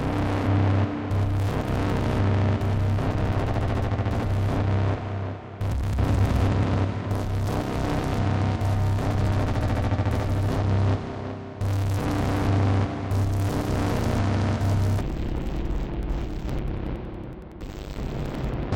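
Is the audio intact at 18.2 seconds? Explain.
No. From 15.01 to 18.76 s, interleaved audio read as planar splits each 92.88 ms block in halves, so the sound plays an octave low, doubled and choppy.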